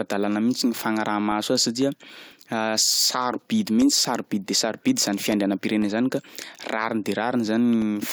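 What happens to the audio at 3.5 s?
At 3.5 s the speech sits inside a run of periodic USB or driver dropouts lasting from 0.32 s to 7.82 s. Every 0.5 s, about a millisecond of audio is replaced by silence, giving evenly spaced ticks during speech. That strict regularity separates them from random packet-loss gaps.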